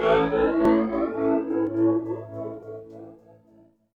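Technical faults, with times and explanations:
0.65–0.69 s, 1.67–1.70 s and 2.63–2.67 s, overlap between stream segments: at roughly one-second intervals, where each 1.0 s segment meets the next, about 30 to 40 ms of sound is dropped because the two segments' timing claimed the same stretch. The waveform jumps abruptly from one value to another, heard as a small click or skip. On a spectrogram each join shows a thin vertical broadband line.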